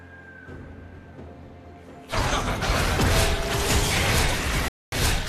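Right near the end, from about 4.68 to 4.93 s, there's a digital broadcast dropout: the receiver stopped getting clean frames and muted, so the sound cuts out for roughly a quarter second, about 240 ms, which fits around ten lost frames, then picks up again.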